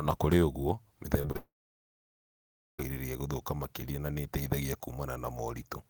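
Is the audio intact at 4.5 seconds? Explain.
Yes, at 4.5 seconds the speech plays through intact, with no audible fault at that moment.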